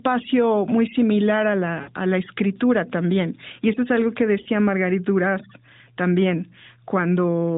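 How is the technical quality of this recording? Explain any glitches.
The recording carries narrowband mobile-call sound, band-limited to 4 kHz with light codec coloration that fits AMR-NB at its 12.2 kbps mode. There are two brief dropouts from lost AMR speech frames.

At 1.82 to 1.91 s, between "muy similar a" and "a la escritura también", about 60 ms went missing. At 4.42 to 4.48 s, after "eso es algo que", about 40 ms went missing. Corrupted frames failed their check, so the decoder repeated the last good pitch and vocal-tract settings at falling gain. This is heard as a short, smeared warble that sags in level before the speech resumes slightly rough.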